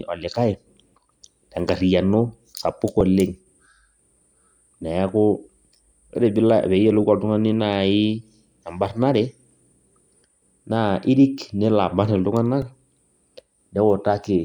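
At 3.01 s and 12.62 s, a repeated buffer replays a 1.45 ms fragment two and then four extra times. It is heard as a brief click or buzz, which fits a 64-sample buffer.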